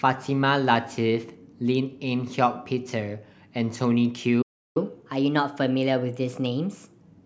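A playback stall runs from 4.42 s to 4.77 s: the speech cuts off mid-flow and the output falls silent for roughly a third of a second, 335 ms, before resuming. A gap like this, with nothing lost from the sound itself, most likely comes from the player running short of buffered data or having its audio thread held up, so it had nothing to send to the output until the feed recovered.

Catch-up at higher speed follows directly, from 4.77 s to 7.01 s. Once playback restarts, the speech runs at 1.15 times normal speed and its pitch sits about two semitones higher, giving a slightly hurried, raised quality. The player is resampling its backlog to make up the time lost in the silence, and after about 2.2 s at this rate the speed and pitch fall back to normal.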